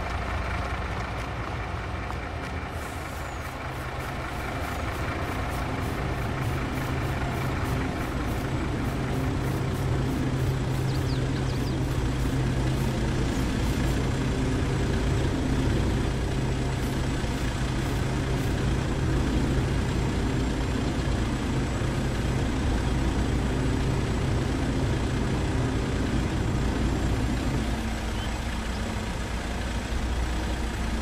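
No technical faults can be heard anywhere in the audio. Nothing in it calls for a timestamp or a repair note.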